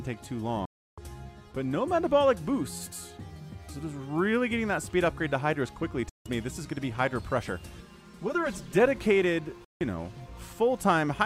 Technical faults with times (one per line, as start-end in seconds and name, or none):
0.65-0.98 digital broadcast dropout
6.09-6.26 digital broadcast dropout
7.80-8.80 channel delay (comb filtering)
9.64-9.81 digital broadcast dropout